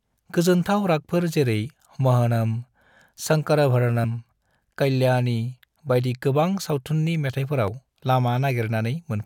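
Two quick glitches in this speech clip, at 4.03 s and again at 7.68 s, both caused by damaged data in a compressed stream. Each lasts only about 15 ms. Bytes in the encoded stream got corrupted, so the decoder choked on those frames, lost its place and had to hunt for the next valid frame header before carrying on. What you hear is a short chirp or blip cutting across the speech.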